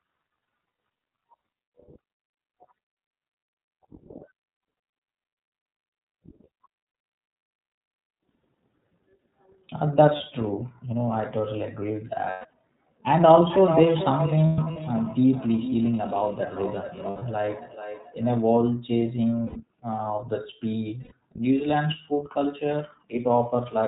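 Throughout, the audio has passed through the iLBC codec. Each frame's excitation is coded on its own, and the frame pattern fits iLBC's 30 ms mode at around 13.3 kbps. Everything above 4 kHz is cut away, so the speech sounds narrow and muffled at the top. The coding roughness is plainly audible as a slightly synthetic, grainy edge on every syllable.

Lost iLBC frames first appear at 6.89 to 6.95 s, a 60 ms gap, and again at 10.17 to 10.21 s, a 30 ms gap. When packets go missing, the decoder fills the hole by repeating the last pitch cycle blended with noise. Each gap therefore sounds like a brief held, faintly buzzy vowel. Because frames stand alone, clean speech resumes almost immediately afterwards.

From 12.29 to 12.53 s, 180 ms of audio is lost in scattered pieces, the longest run lasting about 150 ms. Over that longer stretch the filled-in vowel fades.

From 13.18 to 18.65 s, a feedback echo between two devices sets in. 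A second device in the same room plays this stream aloud, and the first microphone picks it up again. The local echo canceller cannot remove sound it did not play itself. The result is that speech returns roughly every 400 ms, thinner and ringing, peaking at about 8 dB below the direct speech.

Inside that echo, 180 ms more is lost between 14.46 and 14.77 s, with runs up to about 100 ms. A 120 ms gap follows at 17.09 to 17.23 s. Two last losses of 90 ms each, at 19.46 to 19.59 s and 21.03 to 21.12 s, bring back the same short buzzy hold.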